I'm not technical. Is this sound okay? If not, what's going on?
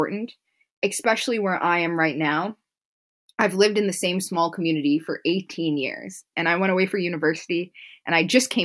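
Yes, this speech recording sounds fine, and nothing in it points to a technical problem. There's no glitch or break anywhere that you'd need to worry about.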